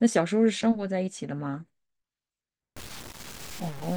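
From 2.76 s to the end of the speech at 3.97 s, the audio turns grainy and rough, consistent with low bit depth without dither. The sound is likely truncated to 6 bits with no dither noise added, so the rounding error tracks the signal itself rather than sitting as a steady hiss. The distortion is strong, roughly 15 dB below the signal, and its texture shifts with the speech, getting grittiest on quieter passages.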